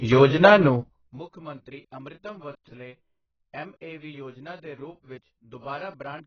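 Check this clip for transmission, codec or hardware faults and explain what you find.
Two faults are audible: codec damage across the whole clip and a burst of zipper noise near the start.

Throughout the speech, the sound is dull and smeared, with heavy artefacts that point to a very low bitrate, likely AAC compression (AAC-LC) at around 14 kbps. At that rate the encoder has too few bits for its frequency lines, so it drops the top band and coarsely quantises the rest. On a spectrogram, nothing appears above 6.8 kHz, and the remaining energy looks patchy and blurred in time.

From 0.74 s to 1.25 s, the level falls by roughly 25 dB in 2 dB steps, at around thirty steps per second, producing zipper noise. Each unsmoothed jump in gain puts a small discontinuity into the waveform, heard as a ticking or zipping riding on the speech while the level drops. The waveform envelope shows a staircase rather than a smooth ramp, and the spectrogram shows faint vertical broadband lines at each step.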